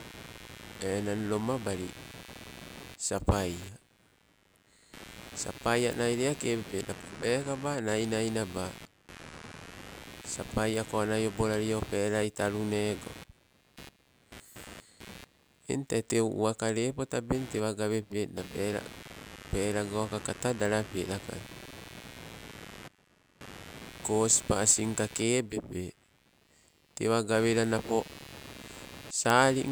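Computer activity noise runs throughout this speech recording: a buzzy, chirping layer pulsing roughly a hundred times a second, sitting around 20 dB below the speech. Processor and graphics load shifts disturb the shared ground of the audio circuit, so the interference tracks the computer's activity rather than the talking.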